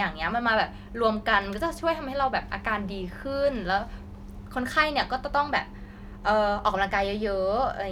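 No technical faults can be heard anywhere in the speech.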